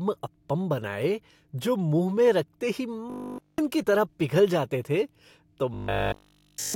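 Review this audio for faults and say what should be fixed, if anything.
Robotic sound from repeated short buffers at 3.10–3.58 s, just before "की तरह पिघल जाते", and 5.74–6.74 s, after "पिघल जाते थे तो": speech becomes a rigid 50 Hz metallic buzz, likely from a 20 ms buffer looping while nearly all incoming audio is skipped. Prevent it by enlarging the playback buffer or fixing the upstream delivery stall.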